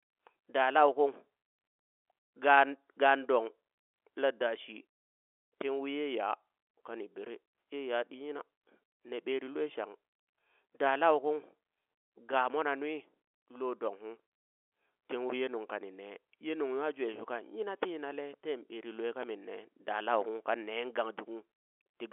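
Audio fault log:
Nothing wrong turns up here; the speech just comes through a standard G.711 telephone line, with its usual narrow band of about 300 Hz to 3.4 kHz.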